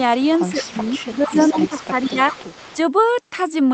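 Speech, with two call-path faults. An echo leak runs from 0.22 to 2.77 s: a faint copy trails the talker by about 167 ms, around 20 dB down, likely from a loudspeaker echo canceller letting pickup through. Speech suppressed in double talk follows at 0.53 to 0.79, 0.98 to 1.02, 1.2 to 1.36, 1.53 to 1.92 and 2.09 to 2.34 s. The voice dips there, deepest in the 0.53 to 0.79 s stretch by roughly 20 dB, likely as the canceller ducked its own talker along with the echo.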